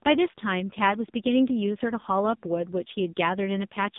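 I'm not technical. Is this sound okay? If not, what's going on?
No. The AMR narrowband mobile codec affects the whole clip, from start to finish. It is the speech format used on older mobile calls. It keeps only a narrow slice of sound, here about 150 Hz to 3.7 kHz, so the voice loses its bass and its crisp top. It also rebuilds speech from a simplified model of the throat, working in tiny 20 ms chunks. This clip uses very little data, so the damage is heavy and the speech comes out buzzy and synthetic.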